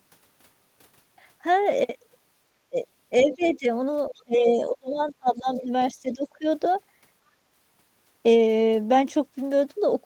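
At 2.7 s the speech dips by about 20 dB for roughly 70 ms, the likely result of speech suppressed in double talk: the echo canceller, hearing both parties at once, turned the near talker down with the echo. On a waveform this is a sudden pinch in the envelope, and on a spectrogram a brief fade.

From 3.19 to 3.49 s a faint second voice sits about 20 dB under the speech, likely the other side's voice leaking through from the loudspeaker because the canceller left a residue. It shows as a weak, separate harmonic pattern threaded beneath the main one.

Overlapping this, from 3.22 to 3.67 s, the speech is pulled down by about 15 dB, again likely double-talk suppression.

The heaviest cut runs from 4.11 to 5.72 s. Speech drops by as much as about 30 dB, in pieces totalling around a second, likely from the same suppression. The waveform shows gaps, and the spectrogram shows the energy thinning to almost nothing in patches.

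A milder dip of about 15 dB from 5.94 to 6.45 s is likely another instance. Inside it, at 6.1 s, a scrap of the far voice about 25 dB down likely leaks through.

From 7.32 to 8.22 s the audio behaves like a CD stuck on one turn. The same 180 ms segment repeats five times, with a short mute at each jump, making a fast, even stutter. On a waveform it appears as identical blocks side by side. On a spectrogram it forms a repeating pattern, broken by thin vertical gaps at each jump.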